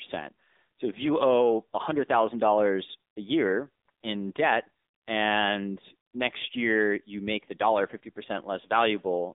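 The speech passed through an AMR narrowband mobile codec at 7.95 kbps, running throughout. The line is confined to roughly 250 Hz to 3.7 kHz with nothing above 3.7 kHz, so the voice sounds thin and muffled, and the low-bitrate pulse model leaves it plainly buzzy and synthetic.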